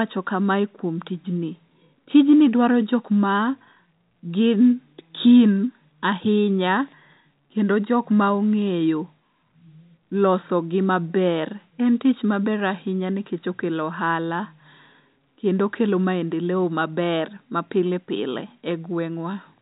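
No technical faults can be heard in the speech, which carries the narrow, band-limited character of G.711 telephone coding with nothing passing above about 3.8 kHz, as expected for a fixed-line telephone channel.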